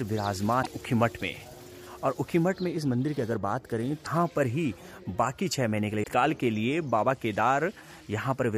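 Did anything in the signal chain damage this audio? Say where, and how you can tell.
Yes: damaged data in a compressed stream at 0.59–0.67, 4.01–4.07 and 6.00–6.06 s. Brief glitches mark corrupted frames where the decoder lost sync and searched for the next header.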